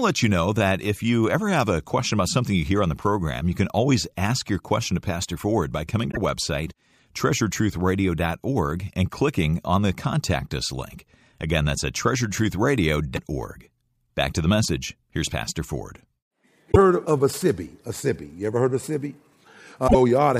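Brief garbled skips, each a jump ahead in the speech, occur at 6.10–6.17 s just after "by coming", at 16.71–16.77 s just before "heard of a", and at 19.87–19.95 s. The likely cause is a broken MP3 bit reservoir: missing frames leave the next frames reading borrowed bytes from the wrong place.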